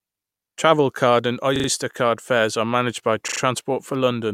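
At 1.56 to 1.68 s and again at 3.28 to 3.40 s, the speech stutters: a repeated buffer. A short slice, fitting a 40 ms buffer, replays roughly three times with a hard join at each repeat, because fresh audio failed to arrive in time.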